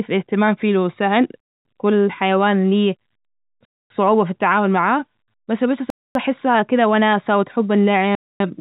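At 1.40, 3.65, 5.90 and 8.15 s the speech drops into a hard-edged hole lasting 250 ms each time, so the gaps end at 1.65, 3.90, 6.15 and 8.40 s. That's a gap between chunks: the audio is being delivered in 2-second pieces with silence inserted at every join, probably padding or a late start on each new chunk. Nothing seems to be cut, but the flow stalls on a steady beat. Under it, the narrow telephone band tops out around 3.8 kHz, consistent with G.711 A-law.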